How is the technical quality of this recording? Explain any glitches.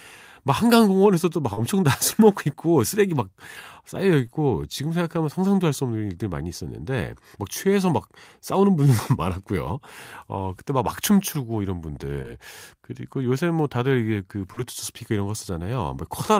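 The speech has four brief glitches, all short concealed packet loss. They occur at 1.53–1.59 s, 4.27–4.30 s, 12.22–12.26 s and 14.53–14.59 s. Each time, 20 to 40 ms of audio arrived too late. The decoder patched the gap by extending the preceding sound, then blended back. Each one sounds like a quick smear or wobble.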